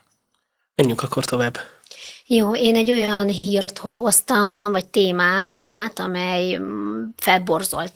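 From 2.83 to 4.03 s the speech breaks into repeated stalls, a stutter: packets kept arriving late, so eight short gaps, the longest 150 ms, were bridged by stretching the previous sound. A spectrogram shows smeared, repeated frames covering about a third of that span.

At 4.42 to 4.68 s and again at 5.37 to 5.84 s comes a call audio freeze, likely from packets held up in transit, emptying the buffer. The last sound hangs as a fading buzz for 230 ms and 440 ms, seen as flat, blurred horizontal bands before speech resumes.

From 6.88 to 7.55 s a jitter buffer slow-down repeats single pitch periods to rebuild its reserve, adding 69 ms and running at 91% speed with unchanged pitch. Sounds drag slightly, and the waveform shows duplicated, near-identical cycles.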